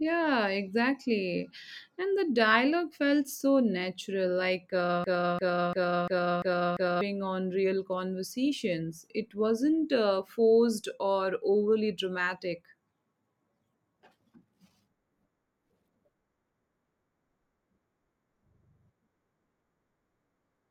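From 5.04 to 7.01 s, a broken-record loop: a 345 ms fragment repeats exactly six times, likely from a stalled stream. Normal speech resumes at "on real conversations".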